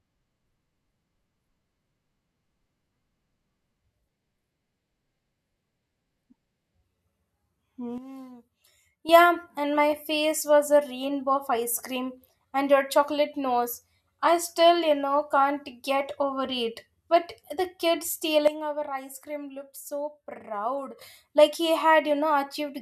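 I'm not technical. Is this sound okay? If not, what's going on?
No. Twice the recording's volume setting was most likely switched down all at once instead of being faded. This is called a sudden gain jump. From 7.98 to 9.09 seconds, and again from 18.48 to 21.01 seconds, the speech and the background hiss drop together to a noticeably quieter level in an instant, then jump back up just as abruptly when each stretch ends.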